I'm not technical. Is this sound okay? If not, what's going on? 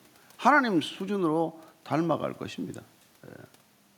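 Yes, nothing is wrong here.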